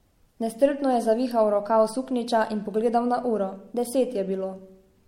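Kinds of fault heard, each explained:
Generation loss: the speech sounds swirly, smeared and hollow throughout, with softened consonant attacks and nothing above about 16.6 kHz, which fits a 64 kbit/s MP3 that was likely re-encoded about three times, each pass adding fresh quantisation noise and spectral holes.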